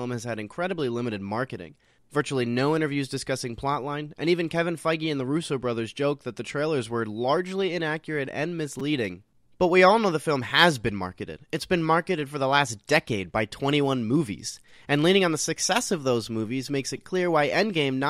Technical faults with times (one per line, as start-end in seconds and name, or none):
8.79 repeated buffer
10.49 repeated buffer
16.97 repeated buffer